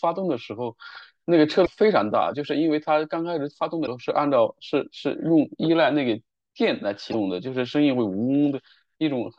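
Speech with damaged data in a compressed stream: brief glitches at 1.62–1.68, 3.83–3.88 and 7.09–7.14 s, where the decoder misread corrupt frames and resynchronised.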